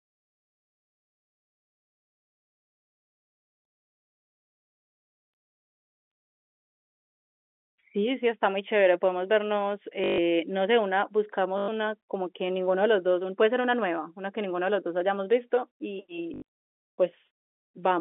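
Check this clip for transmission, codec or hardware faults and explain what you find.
Three dropouts are audible in this telephone-band speech. The 250 Hz to 3.5 kHz G.711 path carries the rest as expected.

Packet loss with last packet repeated occurs at 10.04–10.18 s (140 ms), 11.58–11.68 s (100 ms), and from 16.34 s, where 140 ms of loss is scattered over about 160 ms with an 80 ms longest run. The receiver replayed the last packet until new ones arrived. The loops ignore the pitch period, and the runs buzz at about 50 Hz, which fits 20 ms packets. The result is a brief robotic stutter. On a waveform, identical blocks repeat. On a spectrogram, the spectrum freezes into evenly spaced vertical stripes.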